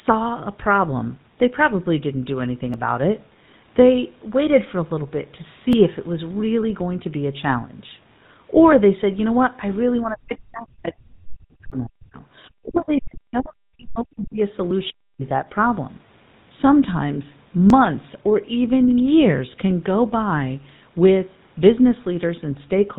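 From start to finish the speech carries the buzzy, gravelly roughness of the GSM full-rate codec at 13 kbps, and the damage is plainly audible. The excitation is rebuilt from regularly spaced pulses rather than the real waveform, which is why voicing sounds grainy rather than merely muffled. The codec also removes everything above 4 kHz, so the top end is cut off sharply.

At 2.74, 5.73, 8.72, 11.72, 14.71, 17.70 and 20.70 s the sound skips very briefly. Each skip loses only a few milliseconds, and the two sides are joined with no silence between them. The exact 3-second spacing points to audio missing between chunks. The recorder or processor likely drops a small piece each time it closes one block and opens the next. Packet loss would not recur on such a strict grid.

From 10.05 to 12.16 s, again from 12.64 to 14.39 s, and briefly from 14.90 to 15.23 s, the talker's level collapses by around 40 dB at its deepest, with parts thinning or cutting out. 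This is likely speech suppressed in double talk. The echo canceller, unable to separate the talker from the far side's echo while both spoke, turned everything down. Unlike the chunk skips, these dips last far longer and follow no timing grid.

Between 12.74 and 12.81 s, inside the second dip, a faint scrap of another voice comes through, roughly 20 dB below the speech. This is likely the other side's voice leaking through: the far end's loudspeaker sound reached the microphone and was not fully cancelled. It differs from the suppression around it because foreign sound is added rather than the talker being removed.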